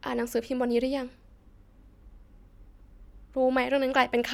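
No technical faults can be heard anywhere in the speech.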